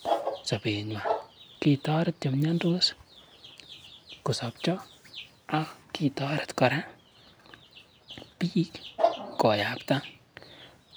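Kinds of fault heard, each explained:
No faults turn up anywhere in this speech recording, so there's nothing to list here.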